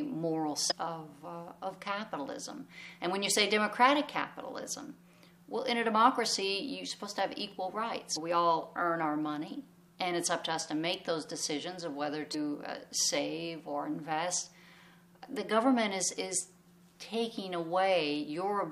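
Damaged data in a compressed stream disrupts the audio at 0.70–0.72 s and 8.15–8.17 s, where corrupted frames make the decoder lose sync and hunt for the next valid header.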